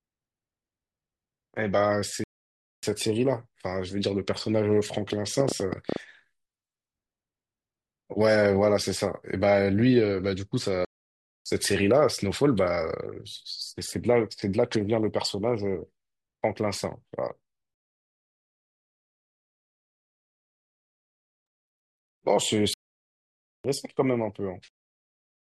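At 2.24 s the speech cuts out for about 0.59 s, then does it again at 10.85 s for 0.61 s and at 22.74 s for a longer 0.91 s. Those are playback stalls, likely from the player running dry or getting blocked. Between 5.13 and 5.97 s there's a train of clicks, roughly ten uneven pops at about 9.6 per second, sitting around 15 dB above the speech. That's likely from interference or a faulty connection or power supply.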